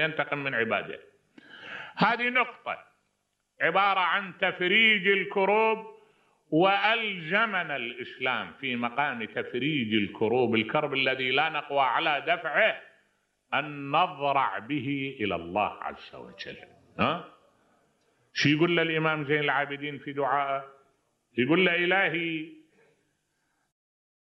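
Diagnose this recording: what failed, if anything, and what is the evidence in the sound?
Nothing in the recording points to a failure at any stage of the chain. The only level change is a smooth fade-out at the very end, beginning around 23.5 s and reaching silence by 23.73 s, with no click or hard edge.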